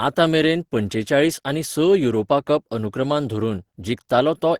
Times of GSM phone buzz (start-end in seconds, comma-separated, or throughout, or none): none